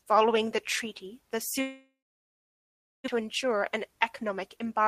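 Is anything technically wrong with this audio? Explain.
Yes, there are two faults in this speech clip.

Long network dropout, from 1.61 s to 3.1 s, right after "that treaty the". Most likely the network stopped delivering packets for well over a second, so the receiver had nothing to play. It stretches the last sound into a fading buzz, and then about 1.1 s of silence follows. When the speech resumes, about 0.78 s of it is simply gone, and playback now runs about 0.7 s behind where it was.

Jitter buffer speed-up, from 3.2 s to the end of the clip. After the dropout, the delayed audio arrives in a burst and overfills the buffer, so the receiver trims it back by repeatedly cutting out tiny pitch-period-sized pieces, around a tenth of a second in total. The speech therefore runs at about 106% of normal speed with its pitch unchanged, and sounds slightly rushed.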